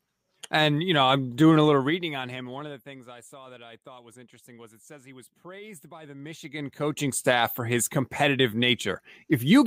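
A gain change applied in unsmoothed 1 dB jumps causes zipper noise from 1.62 to 3.20 s, as the speech is pulled down by roughly 25 dB at around fifteen steps a second. Each jump leaves a tiny click, so a fine ticking rides on the fading speech. The same stepping returns from 6.03 to 7.24 s as the level climbs back by roughly 25 dB, now at about twenty steps a second, giving a faster zipping texture.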